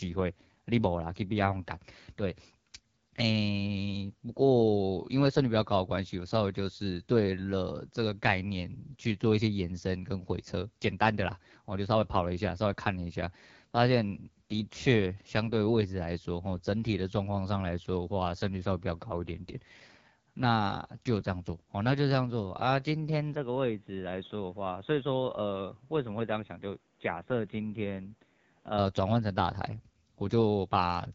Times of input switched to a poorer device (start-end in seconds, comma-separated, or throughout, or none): 23.35-28.78